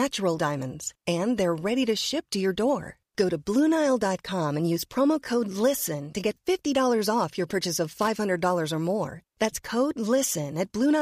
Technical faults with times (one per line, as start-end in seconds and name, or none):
7.92-8.09 loose connector crackle